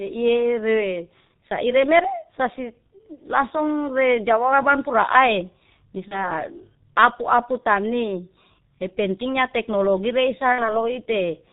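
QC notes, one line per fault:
throughout: G.723.1 codec. The speech is muffled and hoarse. Nothing comes through above 4 kHz, so sibilants and crisp consonants are lost. The damage is heavy, which fits a rate near 6.3 kbit/s. The codec codes the voice in 30 ms frames and updates its model slowly. Fast changes between sounds smear together, and consonants blur into the vowels around them.
6.08–6.30 s and 10.52–10.84 s: VoIP packet loss concealed by the speech codec. The decoder had no data and kept extrapolating its last pitch and filter. It turned the voice down frame by frame. The result is a stretched sound that fades. The first gap fits one lost 30 ms frame. The second comes right after "teknologi reihsa" and fits 60 ms lost. Each frame builds on the previous one, so the voice stays weak or distorted for tens of milliseconds after each gap.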